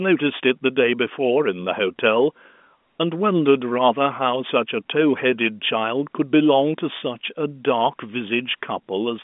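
No technical faults can be heard anywhere in the speech. The telephone link carries it as G.711 A-law coding at 64 kbps, confined to the line band of 200 Hz to 3.5 kHz, with any coding noise faint at most.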